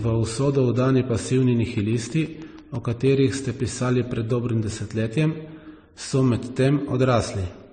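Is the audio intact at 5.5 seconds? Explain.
No. At 5.5 seconds, as across the whole clip, the speech has likely been transcoded between lossy codecs, apparently a low-rate MP3 re-encoded as a similarly thin AAC-LC stream. The second encoder spends bits on the first one's artefacts and adds its own, so smeared, swirly distortion sits on the speech and nothing remains above 9 kHz.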